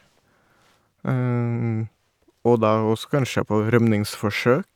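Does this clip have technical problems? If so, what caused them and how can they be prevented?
No, the speech signal shows no technical problems, so there is nothing to trace to a cause or guard against.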